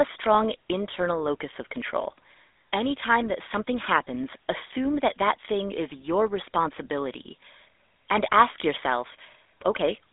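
Throughout, the speech carries GSM full-rate codec damage. Band-limited to roughly 300 Hz–3.6 kHz, it sounds buzzy and gravelly, consistent with 13 kbps pulse-excited coding.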